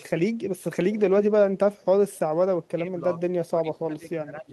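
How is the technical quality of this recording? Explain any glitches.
The recording has two kinds of fault: faint echo in the first half and speech that drops out in the second half.

Echo leak at 0.93 to 1.00 s and 1.76 to 1.85 s: a faint copy of the speech arrives about 230 ms late, roughly 25 dB and then 35 dB down, likely from loudspeaker pickup the echo canceller missed.

Speech suppressed in double talk from 2.71 to 3.03 s and from 3.50 s to the end: the speech drops by up to around 20 dB, likely because the canceller mistook overlapping talk for echo.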